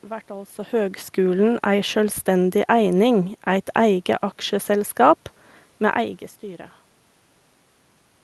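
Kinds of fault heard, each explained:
No technical faults are heard.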